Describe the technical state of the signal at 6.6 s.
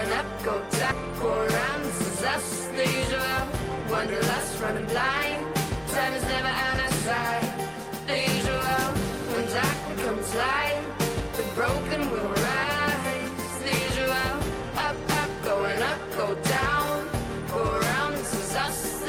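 At 6.6 s the signal is intact, with no dropout, distortion, glitch or other technical fault audible.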